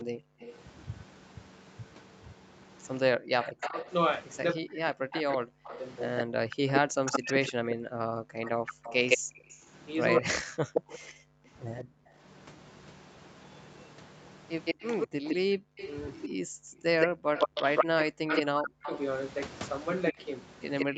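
A second copy of the talker trails the speech by 164 ms from the start to 20.86 s, at roughly the same loudness as the original, so phrases smear into a doubled, hollow slapback. This is an echo leak: the far end is likely playing the call on a loudspeaker, and its echo canceller let much of that sound back into its microphone and returned it down the line. Running almost the whole way through, from 0.04 s to the end, the speech also repeatedly sags, turns dull or breaks into pieces, with the deepest dips falling by something like 40 dB. That points to speech suppressed in double talk: with the leaked echo overlapping the live voice, the canceller could not separate one from the other and pulled the level down on both. Between 9.18 s and 12.17 s the room sound behind the speech drops away in brief holes, well under a second in total, sinking by about 40 dB before springing back. That is background gated by the echo canceller, which clamped the microphone hard while the loudspeaker was active and released it afterwards. 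The audio carries Opus coding from the call path, with content stopping at 8 kHz.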